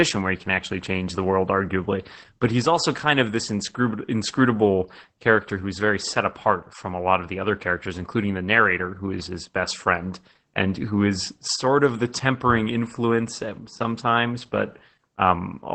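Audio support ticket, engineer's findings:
Opus voice compression throughout, SILK mode, band capped at 8 kHz; coarse excitation coding makes speech muffled, hoarse, slightly robotic, which fits about 12 kbps.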